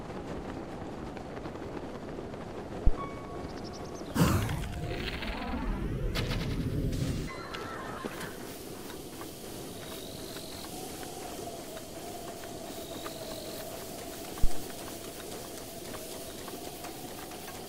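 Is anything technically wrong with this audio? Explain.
Yes. There are two phantom power thumps, one from 2.87 to 2.96 s peaking at about -9 dBFS and one from 14.44 to 14.68 s peaking at about -11 dBFS. Switching a supply on a live input sends a voltage step through the coupling capacitors, and it comes out as a deep low-frequency thump. The first dies away in about 20 ms and the second, broader one in about 54 ms.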